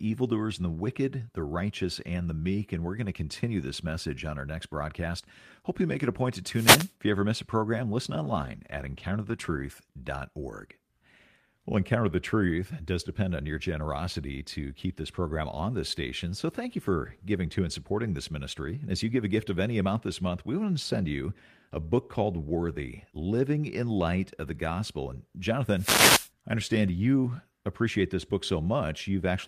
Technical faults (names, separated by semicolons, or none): wireless microphone noise hit; call bitrate drop